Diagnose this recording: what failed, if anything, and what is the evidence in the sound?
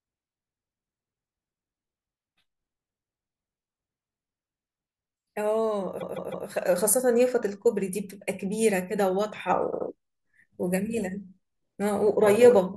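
Repeated frames at 6.00 to 6.47 s and 9.71 to 9.86 s: a codec or storage-stage fault. A 156.7 ms block plays three extra times, then a 78.4 ms block plays twice more, each making a stutter. The rhythm points to duplicated compressed frames, adding about 0.63 s.

Sudden gain jump at 6.78 s: the speech and background noise rise together by about 4 dB in one step and stay louder to the end, with no fade. The likely cause is a digital gain change in processing applied without a ramp.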